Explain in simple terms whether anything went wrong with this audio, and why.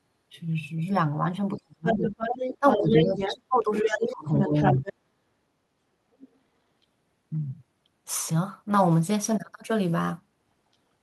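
Speech suppressed in double talk, from 1.56 to 2.02 s and again from 2.59 to 4.85 s: the talker's speech ducks away while another voice is also present. In the first stretch it sinks almost to silence for about a third of a second. In the second it is turned down noticeably for about a second and a half in total. This is likely an echo canceller that could not tell the talker apart from the other side and turned both down.

Other side's voice leaking through, from 1.85 to 4.93 s and briefly from 6.19 to 6.28 s: a second voice can be heard under the talker. In the longer stretch it is about as loud as the talker. At 6.19 s it is only a faint scrap. The likely reason is that the other party was playing from a loudspeaker into the microphone, and the echo canceller did not remove all of it.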